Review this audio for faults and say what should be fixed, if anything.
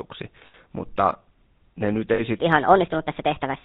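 The whole clip has the buzzy, gravelly roughness and dull top end of the GSM full-rate codec. Nothing above 4 kHz gets through, which fits 13 kbps full-rate coding.

There are lost GSM frames at 0.46–0.55 s and at 2.14–2.21 s, just after "ne nyt". In each case the last good frame gets repeated, so you hear a short metallic ring. The first gap is about 80 ms and the second about 40 ms.

From 2.39 s to the end, that section plays at the wrong speed, 1.37 times too fast. It comes out hurried and about five semitones higher, likely from being played against the wrong clock.

To fix it, capture through a wideband path, protect the link from frame loss, and lock playback and editing to the right sample clock.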